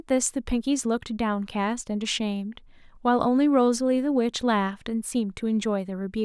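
Nothing in this speech recording stands out as a technical problem; there are no glitches or disruptions to point to at any moment.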